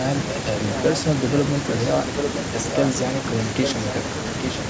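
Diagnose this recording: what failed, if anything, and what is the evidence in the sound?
Near the end, from 4.43 to 4.57 s, a brief delayed copy of the speech surfaces about 842 ms behind the original, only a few dB quieter. This is an echo leak in call processing, likely a far-end loudspeaker echo canceller letting residual pickup return.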